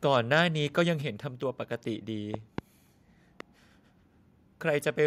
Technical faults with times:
0.37-0.41 microphone overload
0.78-0.81 microphone overload
1.02 microphone volume stepped down
2.34-2.60 loud pop
3.40-3.43 loud pop

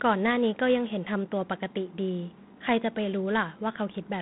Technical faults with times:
0.00-4.22 G.726 ADPCM

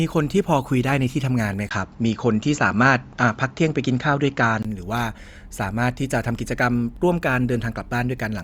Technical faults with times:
1.69-4.65 input switched to a poorer device

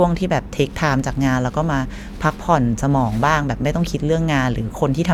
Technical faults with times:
none

